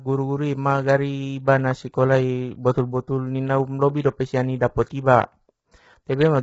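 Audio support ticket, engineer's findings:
Speech rough and grainy throughout, noise filling gaps between voice harmonics, nothing above 7.7 kHz. Likely low-delay AAC compression (AAC-ELD): short frames resolve pitch harmonics poorly, starving bits. Heavy damage, consistent with a rate near 16 kbps.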